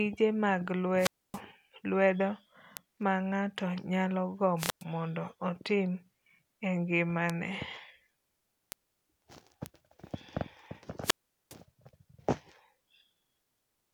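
At 0.97 s the speech goes through a wireless microphone squelch dropout that lasts until 1.41 s. Hiss swells as the FM radio link fades, then the receiver's squelch mutes the output for about 270 ms before the voice returns. At 2.77 s a single-sample bit error spike, peaking at about -9 dBFS, gives one sharp broadband tick. A second dropout runs from 4.57 to 4.84 s, with a shorter mute of about 110 ms. Further bit error spikes follow at 7.30 s (three consecutive samples, about -15 dBFS), 8.72 s (one sample, about -9 dBFS) and 9.66 s (one sample, about -15 dBFS). In each case a flipped bit makes the sample value leap by a power of two and snap straight back. The longest dropout, from 11.02 to 11.55 s, mutes for about 410 ms.

The dropouts differ from a digital packet loss or a noise gate in the rising static just before each hole, which comes from the analogue link failing before the squelch closes. 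The ticks differ from crackle or clipping because each is a lone instantaneous click with no connection to the level or content of the speech around it.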